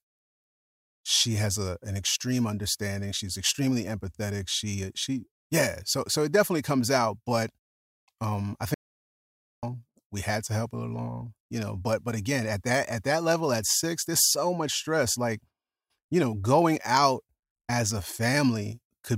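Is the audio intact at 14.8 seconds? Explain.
Yes, at 14.8 seconds the speech plays through intact, with no audible dropout, click, distortion or other fault at that moment.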